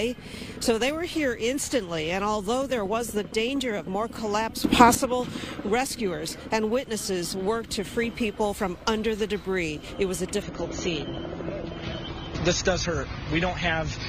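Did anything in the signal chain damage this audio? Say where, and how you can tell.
Yes. At 4.64 s the level and noise floor jump together by about 12 dB until 4.95 s, likely a digital gain change applied in software without any ramp.

From 10.42 s to the end, the adaptive stream drops to a lower bitrate: nothing above 6.9 kHz and thicker codec artefacts, which fits a network-driven switch to roughly 24 kbit/s AAC.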